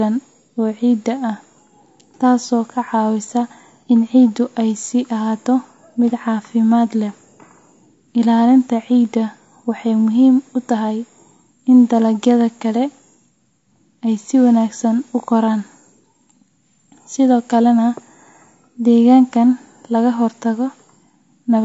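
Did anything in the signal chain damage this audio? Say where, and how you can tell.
Yes. The damage sits at the codec stage and runs through the whole speech clip. The voice is rough and grainy, with noise filling the gaps between pitch harmonics and a top band that sounds thinned and partly synthetic. That points to low-delay AAC compression, likely AAC-ELD at a rate near 32 kbps. Its short frames can't separate closely spaced harmonics well, so at this bitrate quantisation noise spreads between them and the upper band is rebuilt coarsely.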